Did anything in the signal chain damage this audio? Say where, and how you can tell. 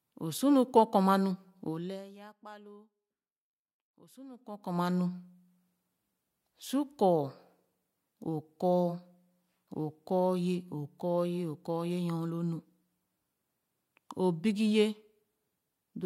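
Yes. Zipper noise appears at 1.66 to 2.1 s, where the speech level falls by about 25 dB, and again at 4.3 to 4.8 s, where it climbs back by about 25 dB. Both ramps carry a fine ticking at about a hundred steps a second. That points to the driver or buffer stage applying gain once per block, roughly every 10 ms, without smoothing. It differs from dropouts or random clicks because the ticking occurs only while the level is moving.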